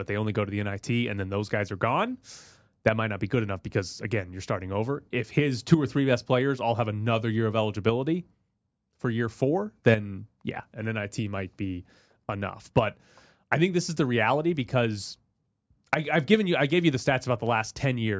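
No technical faults are audible.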